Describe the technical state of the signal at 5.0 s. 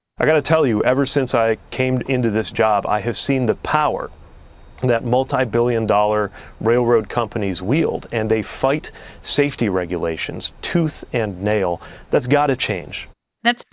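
Nothing is wrong with the signal at 5.0 s; the speech passes through intact there, with no dropout, distortion or other fault to be heard.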